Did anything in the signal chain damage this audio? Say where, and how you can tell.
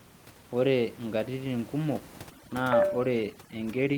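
Yes, overdone noise removal in the call processing stage from 2.3 s to the end: the background drops and breaks up into twinkling specks as quiet bands below the noise estimate are gated off.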